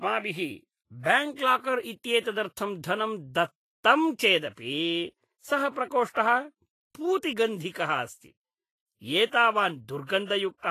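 Vorbis compression, likely the cause, runs through the whole clip: the speech carries a grainy, hissy texture, with nothing above 14.2 kHz. The encoder appears to have been starved of bits, which points to a low rate near 28 kbps. It kept a smooth outline of the spectrum but quantised the treble so coarsely that fine detail turned into noise of similar energy. Tones sound roughened, and consonant onsets come across blurred rather than crisp.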